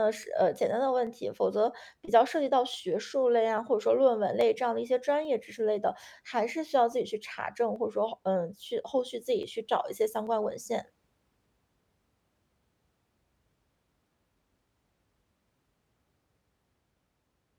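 Clock drift buffer slips run from 0.23 s to 16.96 s, a click recurring every 0.84 s, about twenty in all. Two device clocks likely differ by around 400 ppm, so the buffer between them periodically drops or repeats roughly fifteen samples.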